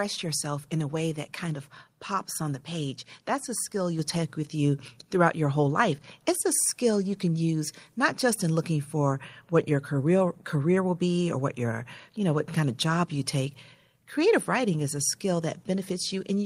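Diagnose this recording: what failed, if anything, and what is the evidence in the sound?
The microphone volume stepped up at 3.99 s, a call processing fault. The speech and the background noise rise together by about 5 dB in one step. The call software judged the input too quiet and raised the device's input volume at once.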